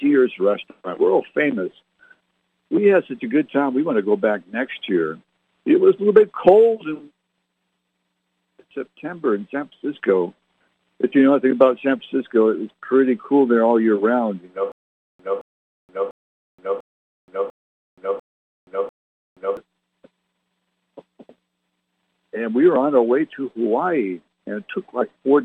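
From 14.72 to 19.57 s there's a stutter with silent gaps: a 220 ms burst repeats seven times with 475 ms of dead silence between, likely a stalled stream retrying.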